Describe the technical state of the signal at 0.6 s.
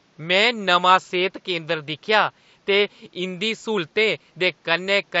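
At 0.6 s the speech signal is intact, with only the room noise sitting about 40 dB below the speech.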